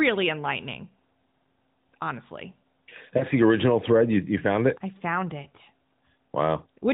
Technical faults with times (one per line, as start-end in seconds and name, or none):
3.18-3.23 lost AMR speech frames